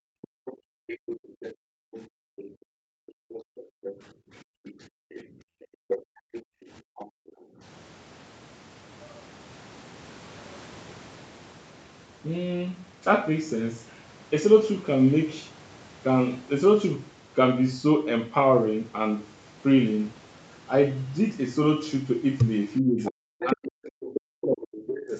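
A speech recording in which the talker's level collapses by roughly 40 dB in brief cuts at 0.01 to 0.07 s and 5.80 to 5.86 s, then again across a long stretch from 22.81 to 25.13 s. This is likely speech suppressed in double talk, where the echo canceller, faced with both ends speaking at once, attenuates the near talker along with the echo. A second voice also runs underneath from 0.22 to 7.32 s at about 15 dB below the talker, flickers faintly at about 35 dB down from 13.89 to 14.02 s, and returns strongly at about 10 dB below from 23.05 to 25.19 s. That is likely the other side's voice leaking through: far-end audio from the loudspeaker that the canceller did not fully remove from the microphone. Between 0.35 and 7.61 s the room tone drops away by about 40 dB, for around four seconds in total, before recovering. This is background gated by the echo canceller, which clamps the microphone hard while the loudspeaker plays. 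Across the whole clip the audio stops at 8 kHz, consistent with the bandwidth of the call path.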